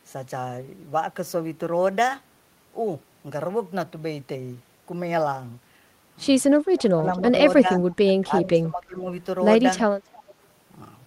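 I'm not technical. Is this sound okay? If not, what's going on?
No, not entirely. Between 6.71 and 7.38 seconds, 7.61 and 7.85 seconds, and 8.01 and 9.07 seconds, the speech dips and partly cuts out. This is likely speech suppressed in double talk. Both sides talked at once, and the call's echo control turned the talker down by mistake.

There is also a faint, delayed repeat of the speech at 7.15 to 7.19 seconds and 10.13 to 10.34 seconds. It comes about a third of a second late. This is likely echo leak: sound from the other side's loudspeaker got back into their microphone and returned.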